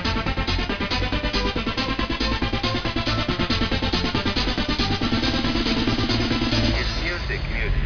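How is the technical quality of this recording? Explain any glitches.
The recording has one fault, present throughout: aliasing. The top of the spectrum runs hard up to a ceiling near 5.5 kHz, which fits a drop from 48 kHz to an 11 kHz sample rate with no low-pass filter beforehand. Content above that limit folds back down to unrelated frequencies, so the high end sounds gritty and metallic. The folded energy sits roughly 10 dB below the wanted sound.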